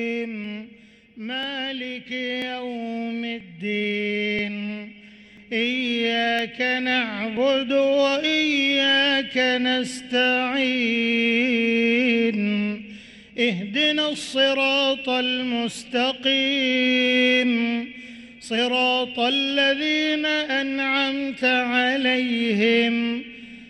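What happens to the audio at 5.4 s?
At 5.37 s, an overlap between stream segments makes the player discard 16 ms at a 1-second boundary, causing a waveform jump, a tiny skip, and a thin vertical spectrogram line.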